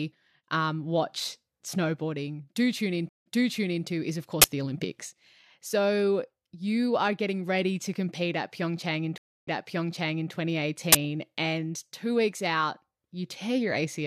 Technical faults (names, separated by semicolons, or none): stream reconnect; uninitialised buffer